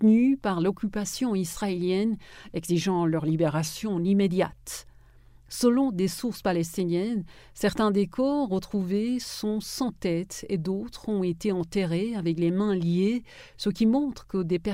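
From 3.45 to 4.05 s the sound slows by 5.6% and drops 99 cents, almost exactly a semitone, then snaps back to normal pitch and speed. This is a drift correction step, likely a clock-matching resampler briefly changing rate to rebalance its buffer.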